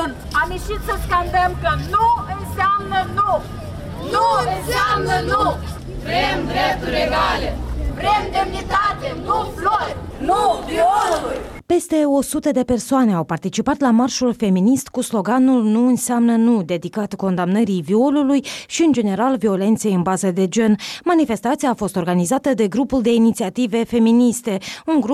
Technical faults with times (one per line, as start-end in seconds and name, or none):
none